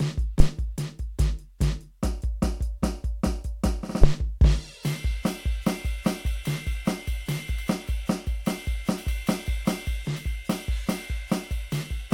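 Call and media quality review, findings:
Phantom power thump at 0.40–0.50 s and 4.04–4.18 s: supply switched on a live input, DC step through the coupling capacitors. Deep thump over the music, peaking near -4 dBFS, decaying within about 22 ms and 32 ms respectively.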